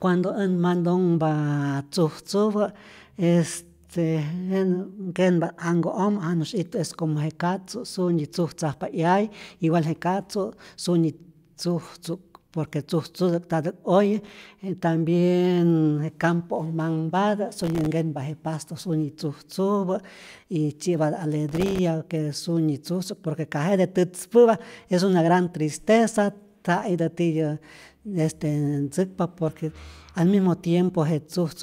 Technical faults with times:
14.24-14.47 processor overload crackle
17.57-17.92 processor overload crackle
21.49-21.79 processor overload crackle

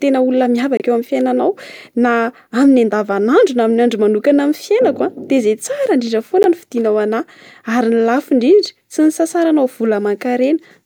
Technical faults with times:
0.77-0.82 corrupt frame decoded
6.43-6.46 corrupt frame decoded

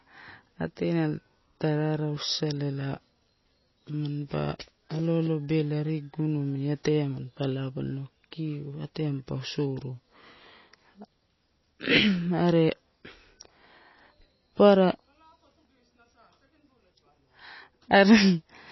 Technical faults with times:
0.00-18.72 MP3 compression

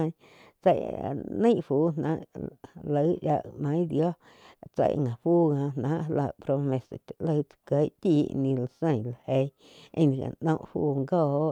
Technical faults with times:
none

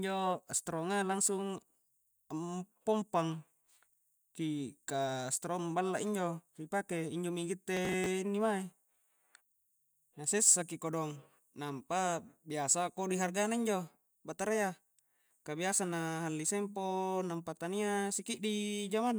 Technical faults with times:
7.77-8.06 processor overload crackle

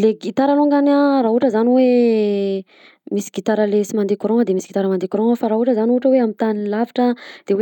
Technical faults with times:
none

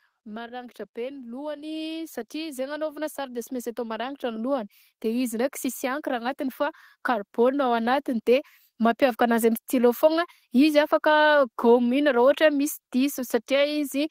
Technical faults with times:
0.23-9.08 automatic gain rising

